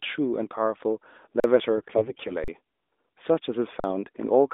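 At 1.40 s the speech just stops dead for 40 ms, then comes back at 1.44 s. That's an underrun with a held sample: the output buffer ran dry and the converter sat on its last value, so the waveform goes flat, usually at a level other than zero. The same 40 ms dropout recurs at 2.44 s and again at 3.80 s. Each time the missing audio is gone for good, so the sound jumps ahead when it resumes.

Between 1.78 s and 2.32 s there's a stretch of AMR bit errors. The speech keeps roughly its pitch and loudness but turns hoarse, scratchy and a bit gargly. That's what you get when the less protected bits in the AMR frames arrive flipped on a poor link, here at something like a few percent. The frames still pass the check on the important bits, so the decoder trusts them and drives the voice model with misplaced pulses and wrong pitch, gain and spectral values. All of this rides on a narrowband mobile sound limited to about 250 Hz to 3.6 kHz, which fits AMR-NB at its 12.2 kbps mode.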